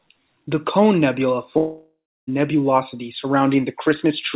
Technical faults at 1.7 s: long network dropout

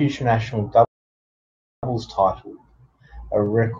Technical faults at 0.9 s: playback stall

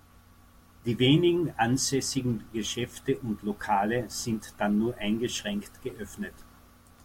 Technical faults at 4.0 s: none

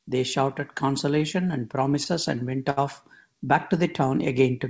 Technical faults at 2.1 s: short stall from a late packet

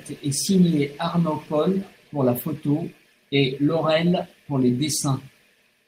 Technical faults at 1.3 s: none

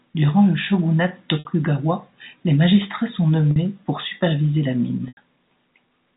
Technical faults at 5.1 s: packet loss with pitch repetition

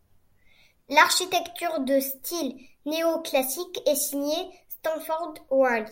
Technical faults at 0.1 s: none

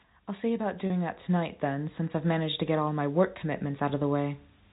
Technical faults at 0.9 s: automatic gain rising; packet loss with pitch repetition

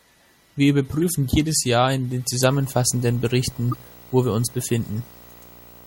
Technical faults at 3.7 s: MP3 compression; video or display buzz; corrupt frame decoded

